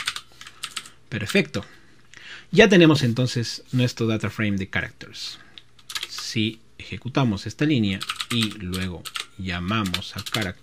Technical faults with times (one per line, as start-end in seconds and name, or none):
2.96-3.03 loud pop